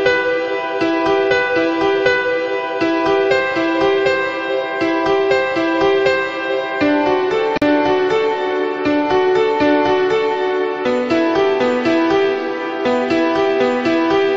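At 7.57 s a gap at a join of encoded pieces opens a silence of about 44 ms in otherwise continuous sound. Separately encoded segments were butted together with their encoder start delay and final-frame padding left untrimmed, so the sound stops abruptly, with smeared edges, and resumes where it left off.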